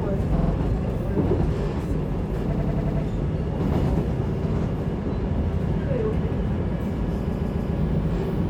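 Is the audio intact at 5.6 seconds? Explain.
Yes, at 5.6 seconds the sound plays through intact, with no dropout, click, distortion or other technical fault at that moment.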